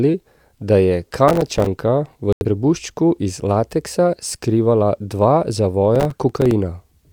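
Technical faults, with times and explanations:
1.28–1.67 s, processor overload crackle: a gritty burst of crackle tears across the speech here. The processor couldn't finish its tiny buffers on time, around 3 ms each, and missed a few dozen of them in quick succession. Each miss drops a sliver of silence with hard edges into the audio, and strung together those clicks read as crackle. It clears up once the load eases.
2.33–2.45 s, digital broadcast dropout: the speech simply cuts out for a moment, then picks up again further along. The receiver lost good frames, two of them here, about 85 ms of programme, and muted until clean data returned. Nothing is repeated or smeared over the hole. That stretch of audio never arrived, so it's gone, and the sound resumes past it.
5.96–6.51 s, processor overload crackle: same tearing texture as before, a bit longer this time but sparser. Roughly twenty of those ~3 ms buffers were missed, each one leaving a sharp-edged gap of silence, so the crackle sounds thinner and more scattered than the first burst. 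It rides on top of the speech and stops as soon as the processor catches up.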